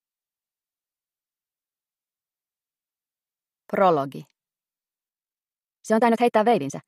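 From 5.07 s to the end there's a time-stretched section: the audio suddenly runs about 1.72 times faster at the same pitch, sounding rushed, likely squeezed by software to fit a length.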